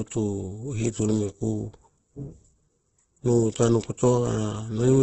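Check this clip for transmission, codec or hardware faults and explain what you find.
One codec fault runs through the whole speech clip. It sounds like heavy Opus compression. Nothing is present above about 8.2 kHz, a wideband limit. The voice sounds rough, grainy and noisy instead of clean. The likely cause is Opus in its music (CELT) mode at a very low bitrate, near 12 kbps. Starved of bits, the encoder keeps each band's energy but fills the bands with folded or noise content. That creates the grain.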